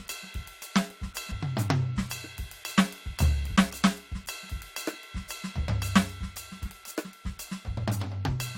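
At 1.30 s the music lurches forward, losing roughly a tenth of a second. Smaller jumps of around 50 ms follow at 4.48 s and from 6.64 to 6.70 s. These are compressed frames skipped: whole blocks of encoded audio were missing or rejected by the decoder, so playback leaps ahead.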